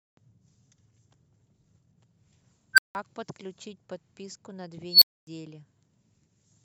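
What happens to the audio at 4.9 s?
That's an unstable filter blowing up between 4.89 and 5.27 s. A recursive filter's feedback runs away, so a squeal around 4 kHz swells over about 0.12 s, clips hard, then overflows and drops to silence for roughly 0.26 s before resetting.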